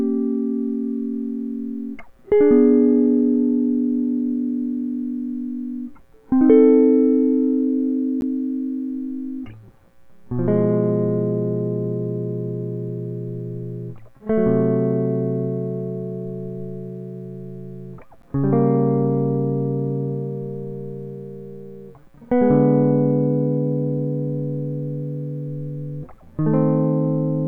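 At 8.21 s and again at 18.22 s the music drops out for a 12 ms hole, a gap between chunks. The audio arrives in 10 s pieces with silence inserted at each join, so nothing's lost, just briefly interrupted.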